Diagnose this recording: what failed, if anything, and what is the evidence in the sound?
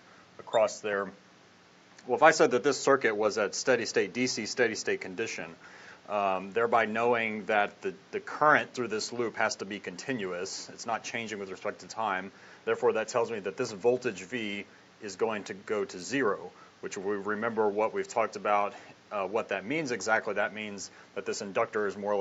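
Nothing in this recording has failed at any stage. The audio stops at about 8 kHz, which is the expected bandwidth of the call microphone processing and the WebRTC call path it passed through.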